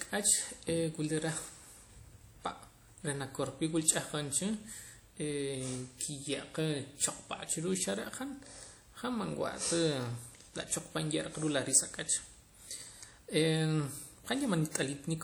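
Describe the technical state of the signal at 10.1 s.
At 10.1 s the speech carries plainly audible transform-codec damage that runs through the whole clip, most likely WMA compression at a rate that points to roughly 48 kbps. Coarse quantisation smears noise across long blocks, so a ringing, washy hiss rises and falls with the speech and weak detail drops out. Unlike a simple low-pass or band-limiting fault, the top end still reaches about 20.1 kHz; the damage is smearing, not lost bandwidth.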